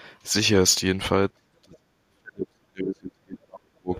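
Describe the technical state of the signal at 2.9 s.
At 2.9 s the speech sits inside a stretch of speech suppressed in double talk, running from 1.32 to 3.93 s. The level dips by roughly 40 dB at its deepest, likely because an echo canceller confused the talker with loudspeaker echo during simultaneous talk. A waveform shows collapsed envelopes, and a spectrogram shows faded energy.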